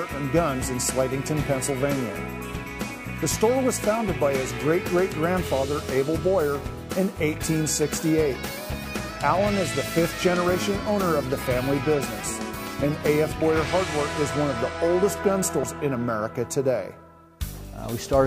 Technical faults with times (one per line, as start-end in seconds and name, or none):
2.54 compressed frames skipped
15.63 compressed frames skipped